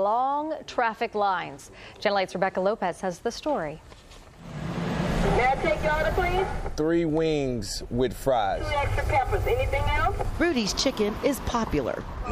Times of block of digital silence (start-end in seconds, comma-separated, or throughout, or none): none